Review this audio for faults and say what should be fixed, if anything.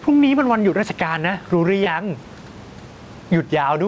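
Gain pumping runs through the whole clip. The gain swings around 10 dB. Likely an over-driven input hitting a fast limiter. Lower the microphone gain so the limiter rarely engages.

Short concealed packet loss occurs at 1.84 to 1.88 s. About 20 ms went missing and was filled by extending the previous sound, leaving a brief smear. A deeper jitter buffer or a steadier network would prevent it.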